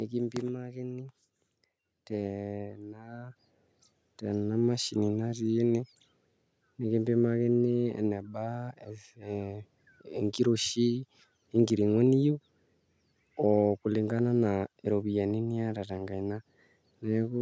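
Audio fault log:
0.05–0.7 s, automatic gain falling: the input reads as too loud or its background too strong, and the gain control reacts by easing its level down about 3 dB over roughly two-thirds of a second. The voice and room noise drop together, so it sounds like the whole scene backs off.
1.91–4.8 s, automatic gain rising: here the input read as too quiet, so the gain control slowly pushes its level up about 10 dB over nearly three seconds. Voice and background swell in step, a gradual bloom rather than a sudden jump.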